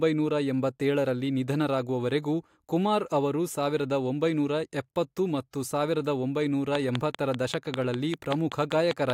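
A speech recording with a train of clicks running from 6.75 s to 9.11 s, right to the end of the clip. The clicks come at a steady 5.1 per second, about fifteen in all, sharp ticks standing about 15 dB above the speech and clearly audible in pauses too. This is likely interference from nearby equipment or a faulty connection or power supply. On a waveform they show as evenly spaced narrow spikes; on a spectrogram, as a row of thin vertical broadband lines.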